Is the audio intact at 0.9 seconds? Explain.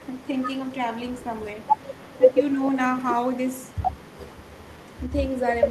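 Yes, the audio is intact at 0.9 seconds, with no fault of any kind at that moment.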